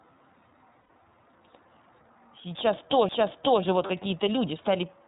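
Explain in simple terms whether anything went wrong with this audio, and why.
A few things went wrong. The whole clip went through the iLBC codec, a phone-style voice codec. It drops everything above about 4 kHz, so the speech sounds muffled and a bit rough and synthetic, and the damage is easy to hear.

There are also lost iLBC frames, at 0.81 to 0.90 s and at 3.86 to 3.90 s. Packets went missing, and the decoder filled each gap by repeating the last bit of voice with some noise mixed in. That's why you hear a short, slightly buzzy held sound. The gaps last 90 ms and 30 ms, which fits three frames and one frame of 30 ms each. Because each frame is decoded on its own, the speech snaps back right away.

Around 3.09 s there's a CD skip. A knock or a flaw made the player's laser jump to a different spot on the disc. You get a tiny tick, a near-instant mute of only a few milliseconds, and the audio carries on from a different place.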